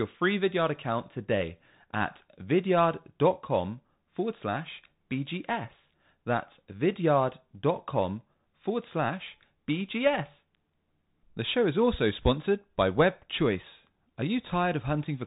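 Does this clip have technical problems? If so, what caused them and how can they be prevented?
Yes. Throughout, the speech passed through a Bluetooth CVSD headset codec, which tracks the waveform in single up-or-down steps, consistent with a 64 kbit/s link. Nothing above 3.8 kHz survives, s sounds turn scratchy, and granular hiss runs underneath. Using a wideband Bluetooth codec prevents this.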